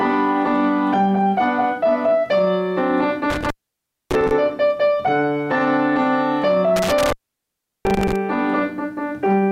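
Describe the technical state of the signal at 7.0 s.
At 7.0 s you're inside an intermittent contact fault running from about 6.76 to 8.16 s. A loose plug or cable breaks the connection, opening the line for roughly 0.73 s in all, so the sound drops out with crackle at the edges and faint hiss in the gaps.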